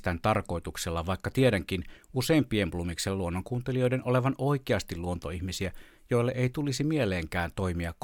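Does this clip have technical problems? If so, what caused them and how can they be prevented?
No, there are no technical faults to be heard in this speech clip. There is nothing here that calls for a cause or a preventive measure.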